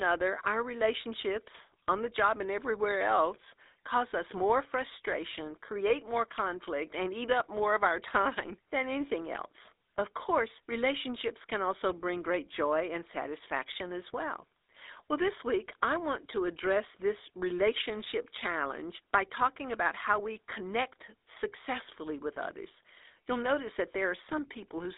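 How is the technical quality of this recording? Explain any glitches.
The recording is technically poor: plainly audible phone-codec coloration throughout, plus one short burst of corruption.

GSM full-rate codec (whole clip): The speech has passed through the original GSM full-rate coder, which fits a 13 kbps stream. It rebuilds the voice from a vocal-tract filter excited by sparse, regularly spaced pulses, which gives the plainly audible buzzy, gravelly roughness. The line band runs from about 300 Hz to 3.7 kHz. On a spectrogram, everything above 3.7 kHz and below 300 Hz is empty, and harmonics look smeared and grainy.

GSM bit errors (8.41–8.50 s): For about 90 ms, which fits roughly five corrupted 20 ms frames, flipped bits reached the decoder. The damaged filter, pitch and gain values make the speech break into a squawking, gargling pop. On the waveform this shows as an abrupt amplitude spike or distorted block. 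The spectrogram shows a short smear of misplaced energy across the band in that window.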